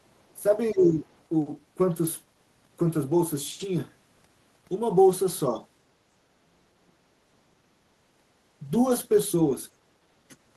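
Speech suppressed in double talk at 0.71–1.08 s, 6.36–7.0 s and 9.8–9.87 s in this speech recording: the voice dips by about 15, 40 and 20 dB, likely an echo canceller turning down both sides at once.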